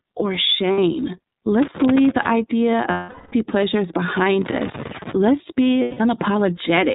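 iLBC codec coding runs through the whole clip, with plainly audible damage. The speech is band-limited to narrowband, with nothing above 4 kHz, and has a slightly rough, synthetic texture. The bitrate sounds consistent with iLBC's 13.33 kbps mode using 30 ms frames, each coded independently.

Lost iLBC frames first appear at 0.72 to 0.79 s, a short 60 ms gap that fits two missing frames. They return at 2.90 to 3.34 s for 420 ms and at 5.81 to 6.01 s for 180 ms. The decoder repeats the last pitch cycle blended with noise, fading across the long gap, so each dropout sounds like a held, buzzy vowel. Normal speech resumes almost immediately afterward because each frame stands alone.

Loose connector crackle occurs at 1.62 to 2.31 s and again at 4.42 to 5.13 s. A worn or dirty contact is rapidly making and breaking, chopping the signal into an irregular burst of scratchy crackle across each stretch.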